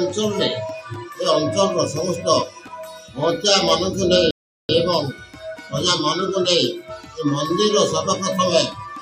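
At 4.31 s the audio drops to silence and picks up again at 4.69 s, a rebuffering stall. The player exhausted its downloaded data and halted playback until more arrived, then continued from the exact point where it stopped. No material is skipped or repeated; the gap simply inserts about 0.38 s of dead air, so everything after 4.69 s plays that much later than it would have with continuous delivery.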